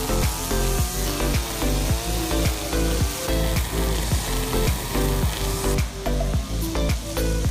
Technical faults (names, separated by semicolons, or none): clock drift buffer slips